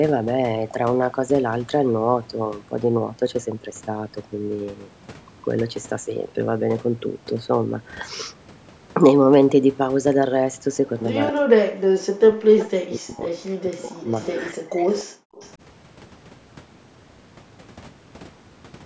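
From 11.31 to 14.07 s the speech dips and breaks up, falling by roughly 40 dB at its deepest across about two seconds. This is speech suppressed in double talk, likely an echo canceller turning down the near talker while the far side spoke. A short echo leak appears at 12.64–12.70 s: a faint copy delayed by 294 ms at roughly 20 dB below the speech, likely residual loudspeaker pickup that the canceller missed. Further leaks at the same delay follow at 14.09–14.37 s and 14.88–15.04 s, both roughly 20 dB down. Between them, at 14.53–14.83 s, a second double-talk suppression cuts the speech by roughly 35 dB. From 15.11 to 15.36 s the background gated by the echo canceller drops out by about 40 dB, as the microphone is pulled down hard and then released. A final, quieter echo leak at 15.36–15.51 s sits roughly 30 dB below the speech, and like the rest of the call-processed audio it carries nothing above 8 kHz.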